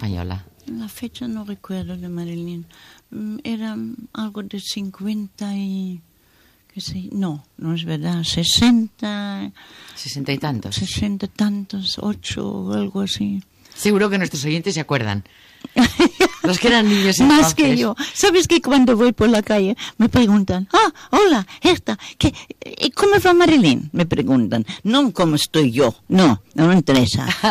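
From 6.93 s to the end, a crude rate conversion adds a gritty, inharmonic fizz that follows loud and high sounds. Samples were linearly interpolated without filtering, which fits a 44.1 kHz to 48 kHz change, leaving error tones about 35 dB below the signal.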